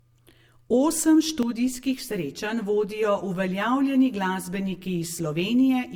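Throughout the speech, layered smearing and swirly artefacts of two different characters sit together, with nothing above 20.2 kHz; this likely reflects transcoding between lossy codecs, MP3 followed by Opus. From 1.43 s to the end, one channel lags by roughly 10 ms and sums into comb filtering: evenly spaced notches starting near 40 Hz leave the speech hollow and phasey.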